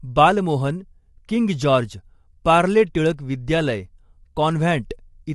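It's a short speech clip with plainly audible low-delay AAC compression running the whole way through: the voice sounds rough and grainy, noise fills the gaps between harmonics, and nothing comes through above 11.5 kHz. That fits AAC-ELD at a low bitrate like 32 kbps as the likely cause.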